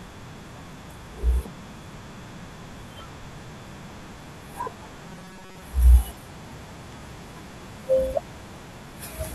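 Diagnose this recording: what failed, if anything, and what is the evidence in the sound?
From 5.08 to 5.62 s the speech becomes a rigid, metallic buzz at 188 Hz: robotic sound from repeated short buffers, with about half the audio repeated. The likely stage is a driver or buffer underrun looping the last 5.3 ms segment.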